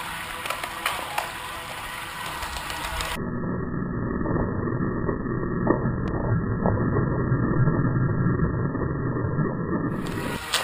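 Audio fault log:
6.08–6.10 s, loud pop: a single sharp pop lasting about 23 ms rises above the sound, peaking roughly 10 dB higher, while the audio carries on unbroken beneath it. The likely cause is a sudden voltage step or pulse, as from a plug, switch or static discharge, shaped by the circuitry downstream. On the waveform it shows as a tall, narrow spike; on a spectrogram, a thin vertical stripe spanning nearly all frequencies.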